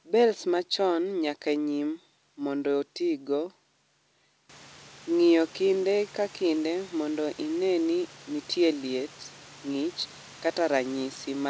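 No technical faults can be heard anywhere here.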